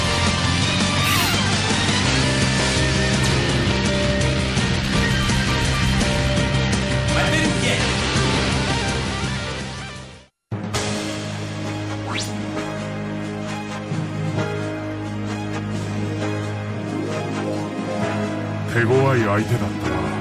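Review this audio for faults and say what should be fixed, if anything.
No faults heard; nothing needs fixing.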